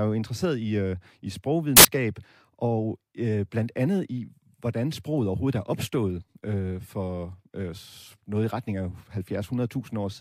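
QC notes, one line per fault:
1.77–1.85 s, samples built from the wrong bytes: right after "interesseret i øh i" the speech gives way to a burst of loud, harsh broadband noise lasting about 80 ms. The sample bytes were assembled misaligned or in swapped order, so the rapidly varying low bits landed in the high-order position and dominated each value.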